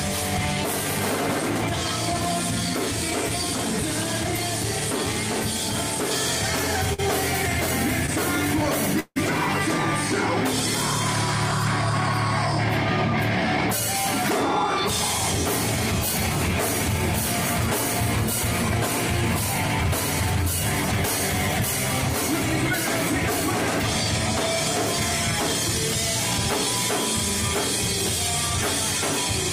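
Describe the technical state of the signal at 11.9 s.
At 11.9 s the signal is intact, with no dropout, distortion, glitch or other fault heard at that moment.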